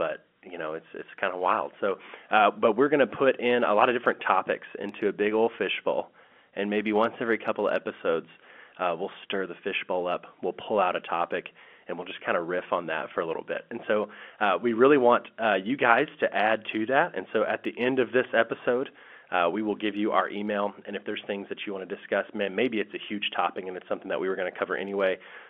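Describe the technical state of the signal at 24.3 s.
At 24.3 s the audio is intact, with no fault present, and the speech comes through the ordinary narrowband character of G.711 telephone coding.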